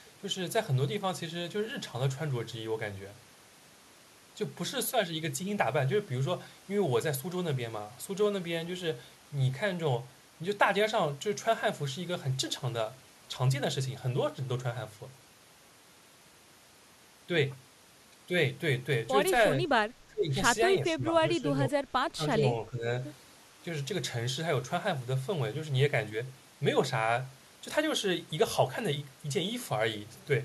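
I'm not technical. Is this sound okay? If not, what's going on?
No. Speech suppressed in double talk at 19.6–19.7, 20.1–20.3, 20.9–21.1, 21.4–21.8 and 22.1–22.9 s: the voice briefly dips quieter, likely because an echo canceller muted it while the other side talked.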